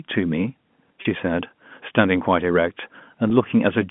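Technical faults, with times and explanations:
1.02–1.05 s and 3.30 s, packet loss with pitch repetition: about 30 ms of audio drops out at 1.02 s and about 10 ms at 3.30 s, which fits roughly three 10 ms packets and then one. The receiver fills each gap by looping the last pitch period of the speech, so both gaps sound like a brief, slightly buzzy hold on the tone rather than silence, before the signal picks up again through the G.711 telephone band.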